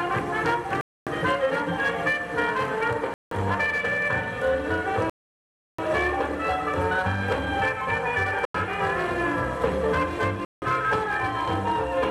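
The sound drops to dead silence at 0.81, 3.14, 5.10, 8.45 and 10.45 s, for roughly 0.26, 0.17, 0.69, 0.09 and 0.17 s, then carries on. That's likely a Bluetooth stall, where interference delays packets until the headphones' buffer runs dry.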